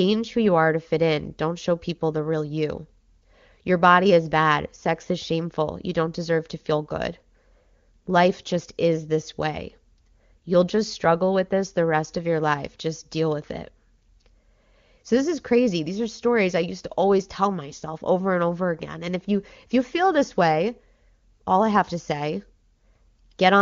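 No technical faults occur at any point in the speech, which is carried by the AMR wideband (HD Voice) codec at 23.85 kbit/s.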